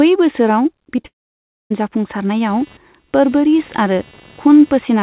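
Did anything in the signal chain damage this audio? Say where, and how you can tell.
Yes, at three points in the chain: the network twice and the analogue side once.

Right around 0.96 to 1.0 s and again at 1.01 to 1.06 s there's short concealed packet loss. Each time a few hundredths of a second of speech didn't make it to the decoder, so the receiver papered over the gap by stretching out the preceding sound and crossfading back. You hear it as a quick smear and wobble on the speech, twice in close succession, the second patch a bit longer than the first.

Straight after that, from 1.06 to 1.81 s, comes something more serious. The last sound carries on as a fading buzz, then there's roughly 0.6 s of dead silence before the speech picks up again, with a small piece never played. That pattern, a concealment tail decaying into nothing, is the signature of a long network dropout, likely the jitter buffer simply starving while no packets came in for well over half a second.

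From 2.5 s to the very end there's computer activity noise underneath. It's a buzzy, pulsing texture around 300 Hz, sitting roughly 30 dB below the speech, and it comes and goes on its own rhythm rather than following the talker. That's the machine's processor or graphics load modulating the shared ground and leaking into the analogue input wiring ahead of the converter. The band-limiting above 4 kHz is just what the G.711 call codec normally does.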